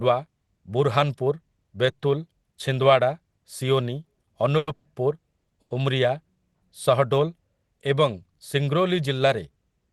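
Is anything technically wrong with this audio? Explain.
Yes. In this speech, played over a call path whose top end stops around 12 kHz, there are two kinds of timing fault, both in the middle of the clip.

Call audio freeze, 4.57–4.69 s and 4.75–4.87 s: packets were likely held up in transit, draining the jitter buffer. The receiver filled each 100 ms wait by extending the last sound, heard as a brief fading buzz or hiss. The speech then resumes where it stopped, nothing lost but 100 ms added each time.

Short stall from a late packet, 5.39–5.49 s and 5.61–5.72 s: a single packet missed its playout deadline, so the buffer ran dry momentarily. The last sound was stretched for 80 ms and then 90 ms until it arrived, giving a held syllable with a slight buzz or dip, no speech missing.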